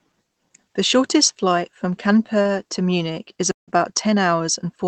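At 2.42 to 2.47 s, a short stall from a late packet emptied the jitter buffer, so the last sound is stretched for 30 ms and held slightly too long before continuing. At 3.52 to 3.70 s, a call audio freeze, likely from packets held up in transit draining the buffer, puts a 0.16 s gap into the speech, mostly 0.14 s of silence, before resuming.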